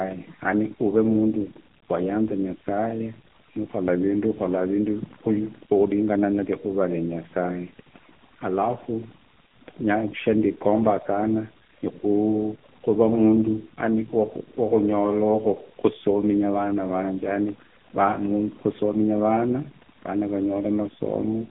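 A speech recording with two faults running through its whole length. Overdone noise removal leaves near-silent gaps filled with twinkling specks; a spectrogram shows isolated flecks and holes in the bands. The AMR narrowband mobile codec makes it buzzy and synthetic, and its heavy damage fits a low mode near 6.7 kbps. Energy sits in a 150 Hz to 3.4 kHz band, with a flat empty ceiling above 3.6 kHz.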